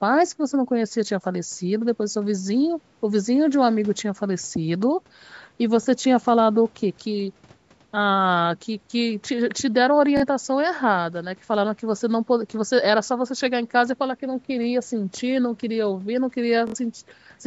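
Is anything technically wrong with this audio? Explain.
Yes. The speech has Bluetooth stutter in three places: 5.83 to 5.87 s, 10.17 to 10.24 s, and 16.67 to 16.76 s. Packets on the wireless link arrived late or not at all. The receiver filled each gap by replaying its last short buffer. You hear a brief buzzing repeat, and then the speech jumps ahead as if it had kept playing. The gaps last about 23, 46 and 70 ms, which fits one, two and then three lost packets. The band stopping near 8 kHz comes from normal call microphone processing.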